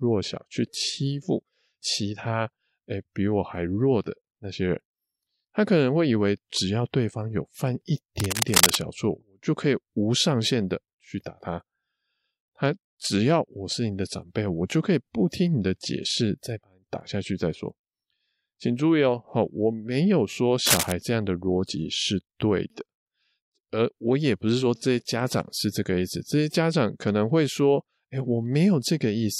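Cable scratch noise hits this speech recording at 8.20 to 8.82 s and again at 20.66 to 20.92 s: dense, uneven rustling bursts roughly as loud as the speech itself, likely from a worn cable or connector being moved so its contact resistance fluctuated rapidly.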